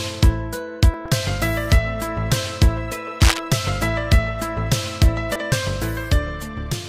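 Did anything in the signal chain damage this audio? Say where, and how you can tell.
Yes. At 0.94 s and 5.52 s the sound jumps forward with no gap of silence, most likely dropped buffers (overrun) at the driver or buffer stage. The skip is short at 0.94 s, around 10 ms, and longer at 5.52 s, around 30 ms. In each case the samples were overwritten before the software collected them, and the two ends were joined directly. On a waveform this shows as a sudden discontinuity. On a spectrogram it is a thin vertical broadband line.

At the codec stage, damaged data in the compressed stream causes a brief glitch from 1.05 to 1.09 s and a single blip at 5.36 s. The decoder hit corrupt frames, lost sync and searched ahead for the next frame header, so the sound glitches. A spectrogram shows a small block of smeared, unnatural energy, sometimes with a shift in the spectral pattern just after it. The waveform looks locally garbled rather than simply cut.

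From 3.20 to 3.39 s there is a burst of scratchy, rustling noise about as loud as the sound itself, likely cable scratch noise in the analogue wiring from a worn connector or cable being moved. The contact resistance fluctuated rapidly and added dense, irregular crackle for about a fifth of a second. On the waveform it appears as jagged spikes riding on the signal. A spectrogram shows ragged broadband speckle across that span.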